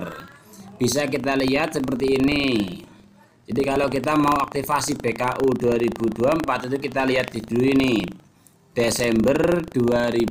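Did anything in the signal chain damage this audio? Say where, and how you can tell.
Yes. Buffer tearing runs throughout the clip, at the driver/buffer stage. It sounds like a steady robotic buzz at 25 Hz, heard only while sound is present, which points to a buffer period of about 40 ms. The application writing the ring buffer and the hardware reading it have drifted so they cross inside each period. A small sliver of every buffer, a few percent, replays audio from roughly 70 ms earlier, with hard joins at both edges producing the rattle.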